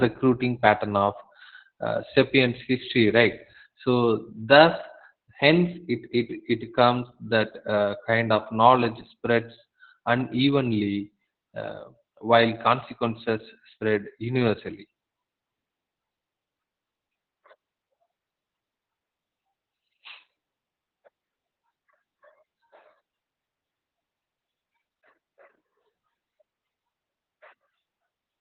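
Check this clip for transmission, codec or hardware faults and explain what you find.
One codec fault runs through the whole clip. Opus voice compression, throughout: narrowband SILK coding removes everything above 4.4 kHz and coarsely codes the excitation, fitting about 8 kbps. The speech comes out muffled, hoarse and slightly robotic.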